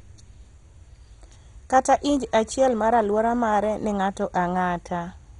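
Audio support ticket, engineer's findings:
MP2 compression, throughout the speech. Dull, gurgling, granular texture, with nothing above 11.2 kHz. Likely an MPEG Layer II encoder starved of bits, fitting a bitrate near 56 kbps: upper sub-bands switched off, surviving bands flickering and heavily quantised.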